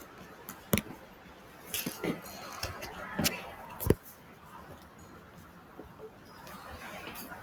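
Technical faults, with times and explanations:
Throughout: noise suppressor applied to music or sounds. A speech-tuned suppressor was left running and keeps treating the steadier parts of the sound as noise, so levels swing by roughly 10 dB. Held parts and tails sink while sharper onsets get through, giving a pumping, thinned-out feel.
4.16 to 4.37 s: sound cut by the noise suppressor. For about a fifth of a second the suppressor mistakes this stretch for noise and pulls it down harder than its surroundings, by about 4 dB at the deepest point. The sound dips.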